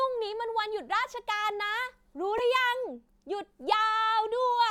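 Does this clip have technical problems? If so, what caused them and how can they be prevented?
Yes. At 2.37–2.44 s a corrupt frame decoded produces a short blip of misplaced energy peaking around -15 dBFS: flipped bits in a few compressed frames made the decoder apply wrong gains and codes. Checksum each frame and conceal damaged frames rather than decoding them.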